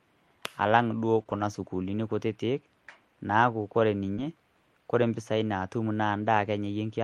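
At 1.19 s, just after "alang' duo", a lost packet rebuilt from error correction plays a rough, noisy 20 ms copy. The audio never drops out, which sets it apart from concealment. At 1.23 to 1.27 s comes a short concealed packet loss before "sukuulini kutiti". Here the decoder stretches the preceding sound forward, producing a brief smear or wobble instead of a coarse copy. From 1.27 to 1.41 s, error-correction rebuilding returns for about 80 ms, which points to four separately lost packets, and sounds grainy without any gap. After "naaku ore", another concealed loss at 4.15 to 4.19 s smears the sound, and a rebuilt packet at 4.17 s adds roughness as the audio recovers.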